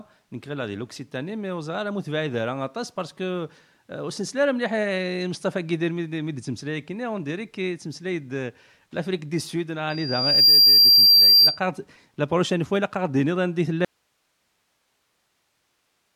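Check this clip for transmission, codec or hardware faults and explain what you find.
Two faults stand out in this speech clip: a feedback squeal and a late dropout.

From 9.90 to 11.60 s there is a loudspeaker feedback squeal. A single tone near 4.7 kHz swells up over about half a second. It ends up roughly 15 dB louder than the speech. A microphone is hearing the loudspeaker it drives. At that frequency the loop returns more than it takes in, so the tone keeps feeding itself until the loop is broken.

At 13.85 s the speech stops abruptly, and it never returns before the end. This is an audio dropout to a faint residue. Only hiss fills the gap, about 50 dB below the speech level. It is not a pause or a fade. The cut is instant. The likely cause is a lost source signal while the rest of the chain stayed powered and live, passing on its own noise floor.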